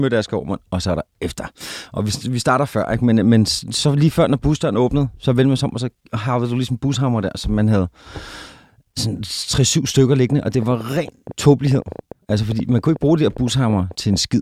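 A train of clicks runs from 10.3 s to 14.17 s: some forty sharp, similar pulses arriving at around 8.8 per second, unevenly spaced, and peaking at about 5 dB above the speech. They are heard as an irregular ticking and popping laid over the voice and continuing through its pauses. The likely cause is interference from nearby equipment or a faulty connection or power supply repeatedly injecting the same short spike into the signal.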